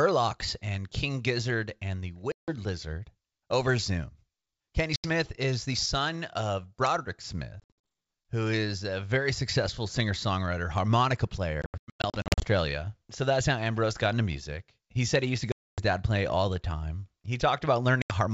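Packet loss on an ADPCM call breaks this speech six times. At 2.32 s about 160 ms drops to hard-edged silence. At 4.96 s an 80 ms hole follows. From 7.60 to 7.85 s some 180 ms is lost in short gaps of up to 60 ms. From 11.62 to 12.46 s about half a second goes in bursts of up to 100 ms. Then come 260 ms at 15.52 s and 80 ms at 18.02 s. After each gap the decoder's predictor and step size no longer match the sender's, so the speech comes back with brief, slight distortion before it settles. Underneath, the 64 kbit/s G.722 wideband coding stays clear up to 7 kHz.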